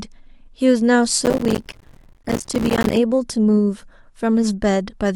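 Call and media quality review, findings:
Processor overload crackle, 1.25–2.96 s: gritty tearing over speech. Many missed deadlines on roughly 5 ms buffers leave silent gaps. Waveform shows dense short dropouts; spectrogram shows vertical broadband click stripes.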